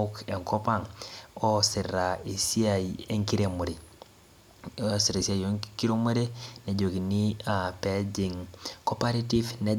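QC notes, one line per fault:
Nothing stood out on listening to this speech.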